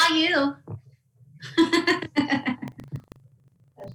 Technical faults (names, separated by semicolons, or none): buffer tearing